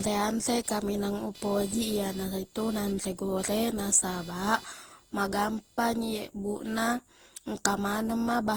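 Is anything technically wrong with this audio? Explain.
Yes, there are two faults.

Generation loss runs through the whole clip. The speech sounds swirly, smeared and hollow, and consonant attacks are blurred. The likely cause is repeated lossy coding, with Opus at 48 kbit/s applied around seven times. Each decode and re-encode quantises the audio again on a shifted frame grid. The coding noise builds up with every pass. The band still reaches about 20.1 kHz, so the hollow quality comes from the repeated passes rather than from a lost top end.

Computer activity noise appears from 0.0 s to about 6.0 s. It is a buzzing chirp with a pulse rate of roughly 500 Hz, sitting around 25 dB below the speech. It rises and falls with the computer's workload, not with the speech. Changing load on the processor, graphics card or mouse disturbs the ground that the audio circuit shares. That disturbance leaks into the recording path as noise.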